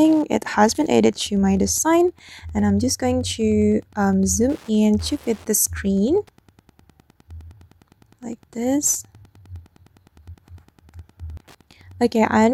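From start to finish there's Wi-Fi interference: a nearby radio's beacon, rectified by the circuit, ticking every 102.4 ms, roughly ten per second, about 35 dB under the sound.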